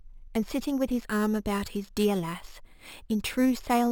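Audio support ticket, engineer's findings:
Imaging from sample-and-hold upsampling, throughout. Metallic fizz tracking the speech, about 20 dB down. Fits a 12 kHz source held up to 48 kHz unfiltered; first image spans 6 to 12 kHz.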